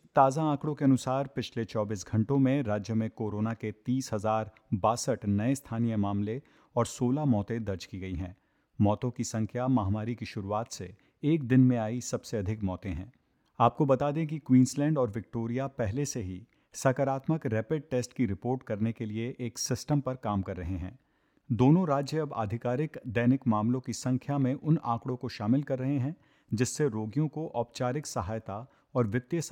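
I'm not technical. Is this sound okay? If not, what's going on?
Yes, nothing audible here needs attention.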